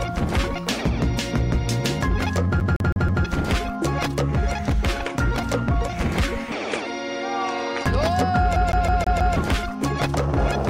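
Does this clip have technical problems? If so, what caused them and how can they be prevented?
Yes. The CD is stuck on one turn at 2.60–3.25 s and 8.56–9.36 s. A scratch throws the laser back a track, replaying one 161 ms slice four, then five times, with a brief mute at each jump. Waveform and spectrogram both show identical repeating blocks split by thin gaps. Cleaning the disc, or ripping it with error-correcting software, prevents this.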